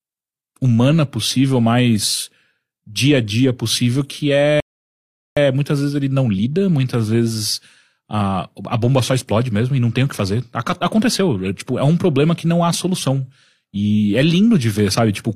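At 4.60 s, after "a dia possível que", the speech drops to silence until 5.37 s and resumes at "muitas vezes ele não" with nothing missing: a rebuffering stall, where playback starved and waited, adding 0.77 s.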